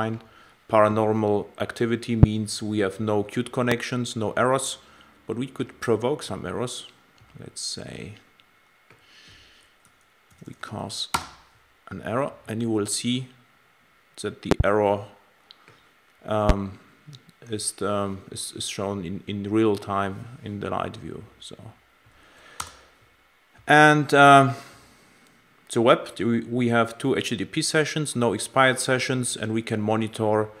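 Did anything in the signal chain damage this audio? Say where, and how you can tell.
Yes. Loud pops sit on top of the sound at 2.23, 3.72, 14.51 and 16.49 s. The one at 14.51 s is a double, with two pulses inside about 0.11 s. Each is a sharp thump, roughly 20 to 25 dB above the signal, and the sound carries on underneath. The stage is likely the analogue wiring. A loose plug, a switch or a static discharge injects a sudden voltage step, and the circuits after it shape that step into a short pulse.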